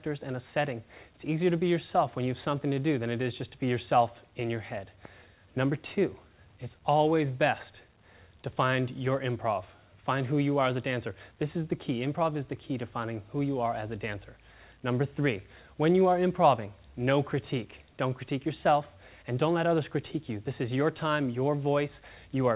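Nothing stood out on listening, beyond the narrow call-codec bandwidth, with nothing heard above about 4 kHz.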